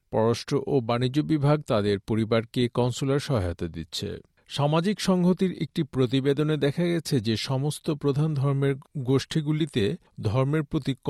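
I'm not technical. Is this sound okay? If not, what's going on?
Yes, nothing wrong can be heard in this sound.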